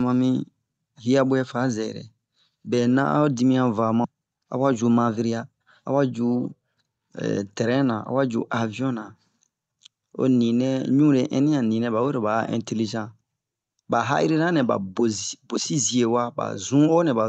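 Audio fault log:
4.04 s, skip ahead: playback jumps forward with no gap filled in, dropping roughly a third of a second of speech. The audio on either side of the cut is butted together almost directly, so a piece of the speech simply vanishes and the next part arrives early. This points to the receiver discarding a backlog of late-arriving audio, or losing it in transit, once newer audio was already queued and waiting.
4.13 to 6.0 s, jitter buffer speed-up: for nearly two seconds the speech runs about 9 percent fast while keeping its original pitch, so it sounds hurried rather than higher. The receiver was holding more audio than its target and trimmed it down by repeatedly cutting out short pitch-period-sized slices, removing something like a fifth of a second in total. Through this stretch the Opus call coding is audible as band-limited sound topping out near 8 kHz.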